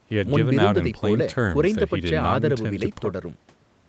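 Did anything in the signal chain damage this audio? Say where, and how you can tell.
No, the chain did no damage: the speech stops at about 8 kHz, as expected from a wideband Opus call path and normal call microphone processing, and nothing beyond that is audible.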